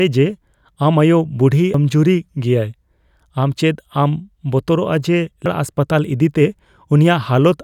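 A brief glitch breaks into the speech at 1.74 s, and a second, similar blip follows at 5.46 s. Both come from damaged data in a compressed stream. At each point, part of the compressed data was lost or corrupted, so the decoder misread the affected frame, lost its place in the stream and had to search for the next valid frame header before playback could carry on.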